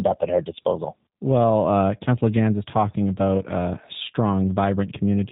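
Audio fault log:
Throughout: G.729 codec. The speech has a rough, slightly synthetic, buzzy quality consistent with an 8 kbit/s G.729A stream, rebuilt from a vocal tract filter, pitch predictor and sparse pulses. On a spectrogram, energy stops sharply at 4 kHz, with smeared harmonics below.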